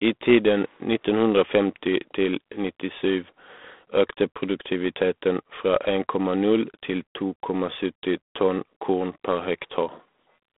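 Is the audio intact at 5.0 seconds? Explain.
No. At 5.0 s, as throughout, the speech carries a harsh, rasping hiss that rises and falls with its level, with nothing above 3.8 kHz. That is G.726 ADPCM damage, consistent with 24 kbit/s: too few bits per sample for the prediction error.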